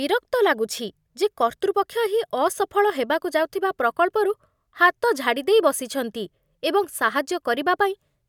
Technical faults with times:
none

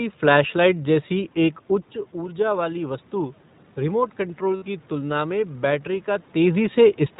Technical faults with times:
0.00-7.19 iLBC codec
2.12-5.60 automatic gain rising
4.56-4.63 lost iLBC frames

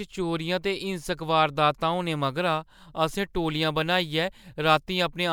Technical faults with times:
2.13-5.33 sample clock jitter

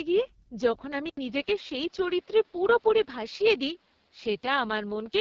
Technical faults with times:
0.00-5.21 AMR wideband (HD Voice) codec
1.09-5.21 input switched to a poorer device

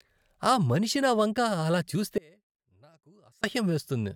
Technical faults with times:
2.18-3.43 audio dropout to a faint residue

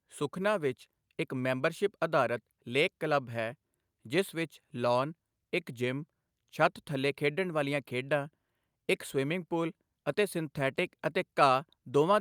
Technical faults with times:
none

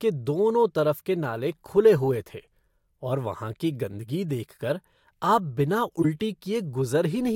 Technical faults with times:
6.02-6.05 corrupt frame decoded

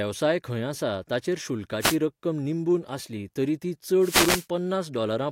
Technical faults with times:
1.80-1.97 wireless microphone noise hit
4.00-4.47 wireless microphone noise hit

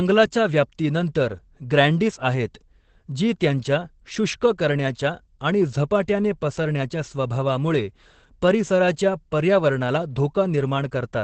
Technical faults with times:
0.00-11.23 Opus voice compression

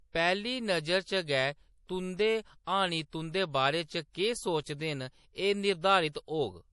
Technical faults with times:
0.00-6.72 MP3 compression
2.64-2.67 pre-echo
6.12-6.15 pre-echo

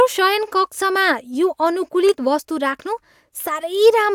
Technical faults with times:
none

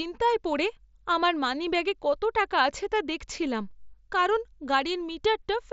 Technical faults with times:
none

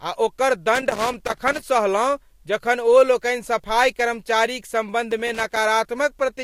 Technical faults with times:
0.75-1.63 loose connector crackle
5.11-5.57 loose connector crackle

